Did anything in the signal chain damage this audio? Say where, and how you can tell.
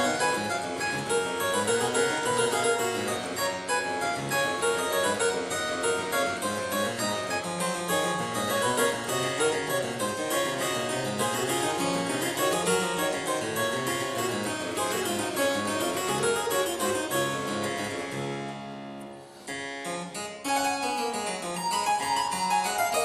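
Yes. The damage happens at the codec stage, and it runs the whole length of the clip. The sound is dull, with a gurgling, granular texture, and this is likely MP2 compression starved of bits, which fits a rate of around 80 kbps. Layer II cuts upper sub-bands out entirely and quantises the rest coarsely. On a spectrogram the top end appears as blocky bands flickering on and off, over a ragged, grainy floor.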